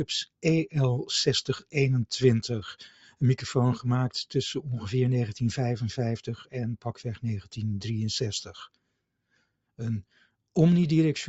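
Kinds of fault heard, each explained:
Sound cut by the noise suppressor: between 2.89 and 3.22 s the suppressor mistakes part of the sound for background noise and pulls it down, by up to about 11 dB, for roughly a third of a second. Unlike a dropout, the sound never vanishes completely, only sinks and thins. Unlike gain-control pumping, the dip stays confined to that short stretch instead of swelling and receding across the whole level.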